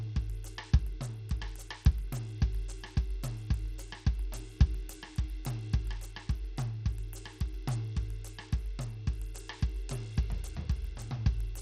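Bluetooth SBC compression runs through the whole music clip, most likely from a low bit pool that points to a bitrate around 80 kbps. Nothing reaches above 15.9 kHz, the upper bands flicker as bits run short, and coarse quantisation leaves plainly audible grit and aliasing.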